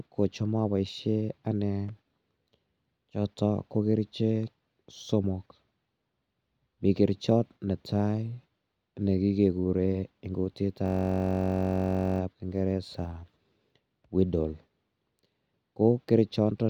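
From 10.86 s to 12.20 s the speech gives way to a system hang loop. The driver or host stalled while the audio hardware kept replaying the same ring buffer, so one 21.33 ms slice of sound repeats exactly, about 63 times. That loop length fits a 1024-sample buffer. Because the slice is so short, it comes across as a steady buzz at 46.9 Hz rather than a stutter. When playback resumes, essentially nothing of the speech appears to be missing.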